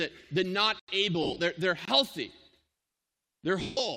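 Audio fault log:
0.79 s to 1.88 s, block of digital silence: the output buffer likely went unfilled twice, and zeros were written in its place. Just after "the not" at 0.79 s the audio drops out for about 88 ms, a clear hole. At 1.85 s a 23 ms gap, which fits a 1024-sample buffer, sounds like a short hole. Each drops and returns with no fade.
1.23 s to 3.80 s, lost LE Audio frames: the Bluetooth LE Audio link dropped frames, and the LC3 decoder filled the gaps by repeating the last spectrum with randomised signs. From 1.23 s, just after "the not", about 100 ms is missing in short bursts across 160 ms, so the sound turns into brief noisy smears. From 3.60 s, 170 ms is lost over 200 ms, including one run of roughly 150 ms, where the smear fades away into near silence.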